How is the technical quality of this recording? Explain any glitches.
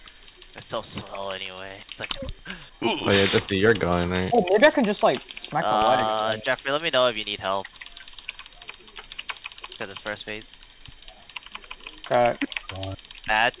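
No technical glitches can be heard in this recording.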